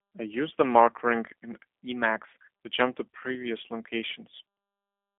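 Throughout the speech, G.729 codec damage is plainly audible: a rough, slightly synthetic quality that fits an 8 kbit/s model-based coder rebuilding speech from filter and pulse parameters. A spectrogram shows energy confined to a 250 Hz to 3.5 kHz band, with nothing above 3.7 kHz.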